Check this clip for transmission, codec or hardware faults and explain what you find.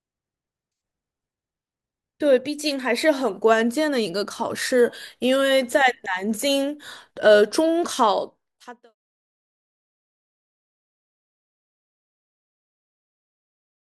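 Nothing stood out on listening, and the smooth fade-out that begins at about 8 s and finishes at 8.95 s arrives without any click or hard edge, just as an editor would shape it.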